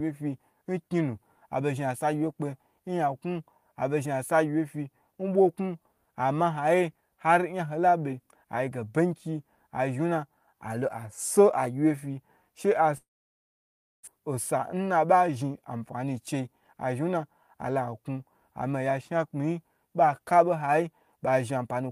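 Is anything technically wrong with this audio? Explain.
Yes, there are two faults. From 12.97 to 14.09 s there is a long network dropout, likely from audio never arriving. The last sound smears into a fading buzz, then nearly a second of silence follows, and about a second of speech is simply lost rather than delayed.

From 14.73 to 15.36 s, just before "anfani chei", a jitter buffer speed-up trims roughly 70 ms in pitch-period slices to shed built-up delay. Speech runs about 9% faster and sounds hurried, yet pitch stays unchanged, unlike a resampling error.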